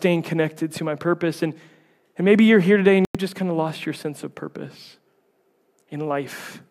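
At 3.05 s the speech drops out for about 96 ms, returning at 3.15 s. The gap falls just after "you're here today and" and before "just kind of lost". This is a digital broadcast dropout. The receiver stopped getting usable frames, either from losing the signal or from frames failing their checksum, so it muted. The hole fits four missing 24 ms frames. Whatever was said in that gap is gone.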